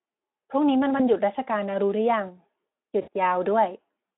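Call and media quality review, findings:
VoIP packet loss concealed by the speech codec, 0.97–1.06 s and 3.02–3.09 s: decoder extrapolates last pitch and filter with falling gain. About 20 ms gap, then 60 ms (one and three frames likely). Brief stretched, fading smear, weak recovery; narrowband Speex line carries it.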